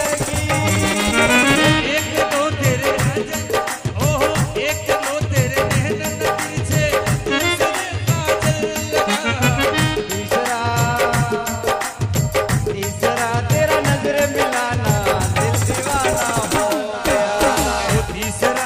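Listening closely, nothing in the audio stood out as a technical problem at any point.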